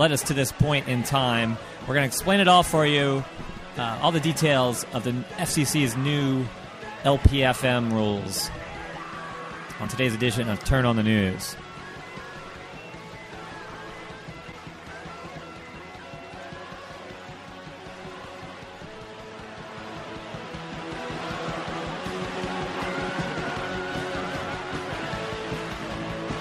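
At 9.84 s and again at 15.27 s the audio jumps forward: compressed frames skipped. The decoder received missing or damaged frames and dropped them. The first jump loses roughly 30 ms of audio, consistent with a single frame of about 26.1 ms. The second loses roughly 70 ms, which points to about three frames.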